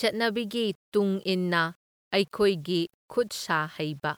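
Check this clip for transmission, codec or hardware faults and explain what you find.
The speech has one fault, heard all the way through.

Low bit depth without dither, likely rounding to about 9 bits: quiet passages turn gritty, and the error, roughly 40 dB down, follows the signal, visible as stepped waveforms and signal-shaped spectral hash.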